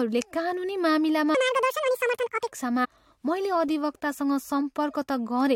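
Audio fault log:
1.35–2.48 s, section at the wrong speed: right after "कानुनी मामिलामा" the speech suddenly runs 1.84 times too fast and jumps up by roughly ten semitones, so it sounds squeaky and rushed. Speed and pitch shift together, which likely means this stretch was played against the wrong clock.
2.84–2.86 s, damaged data in a compressed stream: a quick glitch where part of the compressed data is corrupted. The decoder can't make sense of the frames there, loses sync and hunts for the next frame header, and that garbled decoding comes out as a brief glitch.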